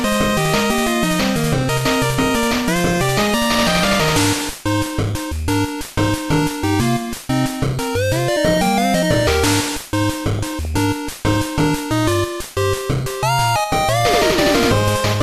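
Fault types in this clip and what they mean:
MP2 compression: Likely an MP2 encoder short of bits, consistent with roughly 80 kbps, switching off upper sub-bands, so the sound is dull and granular throughout.
DAB burbling: Weak-reception bit errors slipped past error correction and corrupted the MP2 audio data, so from 10.37 to 10.78 s short blips of noise appear in single sub-bands.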